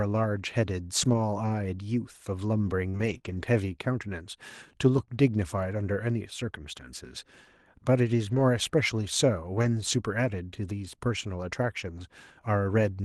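Between 1.01 and 5.15 s there are scattered short gaps. About four small holes open in the stream, the longest around 40 ms. Together they remove 100 ms of the signal. The receiver covers each one by stretching the last bit of sound forward, spending about 380 ms on repairs. The speech stays clear. Each patch is heard as a brief tick, smear or hiccup.

At 8.27 to 8.41 s comes a lost packet rebuilt from error correction. 80 ms of audio is replaced, which fits four 20 ms packets. The next packet carried a coarse, low-bitrate copy of each missing piece, and the decoder plays that copy. So nothing drops out. That stretch turns rougher and noisier instead. The same happens at 9.57 to 9.67 s, where 60 ms is rebuilt, consistent with three packets. In this Opus call the band already stops near 12 kHz, so the rough patches stand out as grain rather than lost treble.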